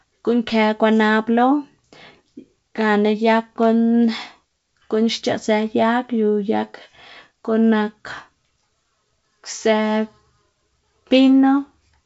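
No technical faults are audible.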